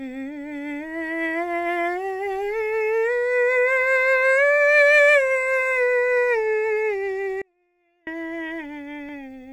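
The music cuts out abruptly at 7.42 s and returns at 8.07 s, leaving only a faint trace far below normal level for about 0.65 s: an audio dropout to a faint residue, likely from the signal path breaking while the downstream chain stayed live.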